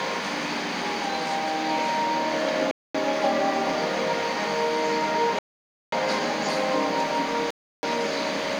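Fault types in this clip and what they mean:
Bluetooth stall: the sound cuts to clean silence at 2.71 s, 5.39 s and 7.51 s, for about 0.23, 0.54 and 0.33 s, likely because the headphone buffer emptied while resent packets arrived. Unlike codec errors, these gaps are silent, not garbled, and restart abruptly.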